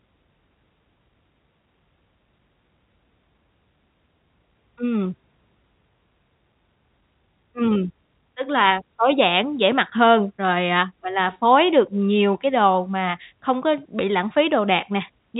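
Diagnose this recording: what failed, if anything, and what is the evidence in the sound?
Nothing has failed here: the speech sounds like an ordinary G.711 telephone call, with the top end stopping around 3.8 kHz as that format is designed to, and no stage in the chain gives any sign of trouble.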